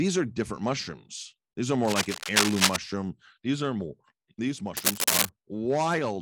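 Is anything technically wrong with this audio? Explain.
Yes. From 1.85 to 2.76 s, and again from 4.76 to 5.30 s just after "are more these", a dense, uneven scratching rustle sits over the speech, first about as loud as it and then somewhat louder. This is cable scratch noise, likely from a worn cable or connector being moved so its contact resistance jumps about rapidly.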